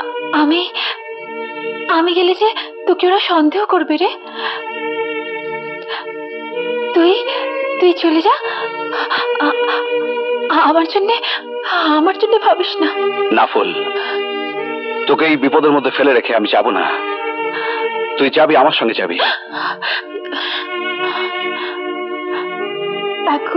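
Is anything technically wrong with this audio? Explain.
No, nothing technically wrong can be heard in this audio. No path is singled out as working, so there is nothing further to point to.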